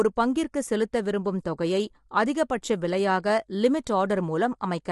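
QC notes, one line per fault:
Throughout: low-delay AAC compression. Speech sounds plainly rough and grainy, with nothing above 11.6 kHz. Likely short codec frames blurring harmonics, consistent with about 32 kbps.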